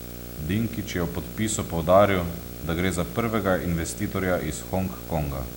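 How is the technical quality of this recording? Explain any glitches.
The recording is compromised by one steady fault. Video or display buzz runs through the whole clip: a screen or video cable is leaking into the audio path, putting a buzz at the picture's field rate of 59.94 Hz with a ragged hash above it, plus a thin whine at the line rate near 15.7 kHz. It sits fairly loud, not far beneath the speech, so the buzz and whine stay audible behind every phrase.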